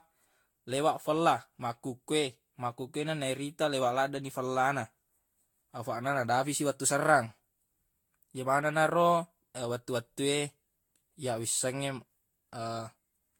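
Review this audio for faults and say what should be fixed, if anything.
Generation loss runs throughout the speech, with swirly, hollow smearing and blurred consonant attacks. It likely comes from around seven successive Vorbis re-encodes near 70 kbit/s, each requantising on a shifted frame grid so the errors pile up. It differs from a single low-bitrate encode because the band still reaches 19.2 kHz, yet the artefacts are heavier than that bandwidth suggests. To prevent it, keep a lossless master and encode to a lossy format only once, at the final step.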